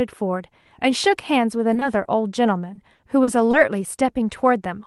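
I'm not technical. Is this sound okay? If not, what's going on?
No. There are two related problems in this speech recording.

Short concealed packet loss happens at 1.73 to 1.77 s, 1.79 to 1.83 s and 2.03 to 2.07 s. Each time, a tiny piece of the call, about two hundredths of a second, arrived too late to be played. The receiving end covered the hole by stretching the sound just before it and then blending back in. You hear a quick smear or wobble, and a short consonant sound might drop out.

Repeated packet loss (robotic sound) runs from 2.73 to 3.55 s. Here the same thing happens four times in quick succession, with the longest hole lasting about four hundredths of a second. Altogether roughly a seventh of that stretch is filled-in guesswork rather than real audio. Because each new hole follows soon after the last patch, the speech turns choppy, with small pieces missing.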